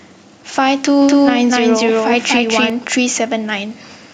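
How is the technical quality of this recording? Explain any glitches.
The recording has a clear technical fault. Gain pumping runs throughout the speech: the gain swings by around 5 dB, ducking under louder syllables, likely from excessive input gain hitting a fast limiter.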